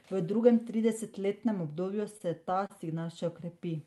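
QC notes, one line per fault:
2.01–2.72 s, repeated stalls (stutter): after "drugem tridesetletnem" the jitter buffer ran empty four times. The receiver stretched the last sound to bridge 69 ms in total (the longest gap was 31 ms), so nothing is lost but the speech hitches and drags. The spectrogram shows brief smeared, repeated frames beneath the Opus call path's 12 kHz ceiling. The waveform shows short looped cycles.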